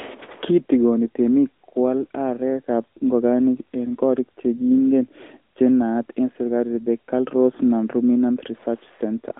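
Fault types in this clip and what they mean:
AMR narrowband mobile codec: the speech is rebuilt from a vocal-tract model driven by a few pulses per short frame. It sits within about 300 Hz to 3.6 kHz, nothing above 3.8 kHz, with a plainly audible buzzy, synthetic texture that fits a 10.2 kbps mode.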